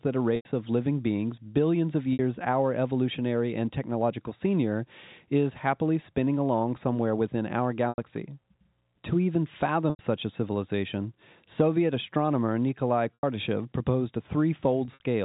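Packet loss with pitch repetition occurs at 0.36, 2.13, 7.89, 9.9, 13.14 and 14.85 s. Each gap is filled by repeating the last pitch period, heard as a brief held, buzzy tone. Most gaps last 90 ms. The gap at 2.13 s lasts 60 ms, and the one at 14.85 s is broken up across 180 ms.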